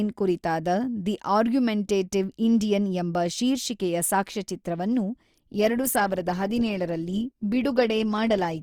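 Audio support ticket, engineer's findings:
Adaptive stream at a lower bitrate, 5.35 s to end: sudden drop to smeared, artefact-laden speech, consistent with a step from about 64 to 16 kbit/s Opus. Stream switch after bandwidth fell. Unlike a dropout or rebuffer, no gap or stall.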